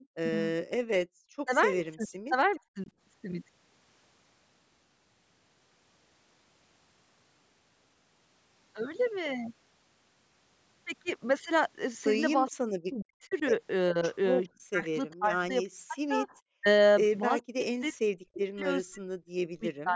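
At 0.2 s the talker's voice dips sharply for a brief moment, falling by roughly 40 dB. This is speech suppressed in double talk. The likely cause is both sides talking at once. The echo canceller could not tell this talker apart from the loudspeaker echo, so it turned everything down.

From 1.05 to 1.45 s the room sound drops out, by about 40 dB. This is background gated by the echo canceller. The far side was playing through the loudspeaker. The canceller clamped the microphone hard, then released it.

From 1.45 to 2.89 s the voice is again pushed down in pieces, adding up to around half a second of loss. Inside that stretch, from 1.79 to 2.59 s, a faint copy of speech trails 414 ms behind. This is an echo leak, very quiet here. The loudspeaker side's canceller likely left some of its pickup unremoved, and that residue came back.

From 12.46 s to the end, double talk suppression returns, with several seconds of the voice dipping or cutting out. 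Within it the 414 ms echo leaks through again. From 12.49 to 13.43 s it is clearest, though still well below the speech. It returns as a brief scrap at 14.43 s and once more from 17.41 to 17.93 s, each time quieter than at 12.49 s.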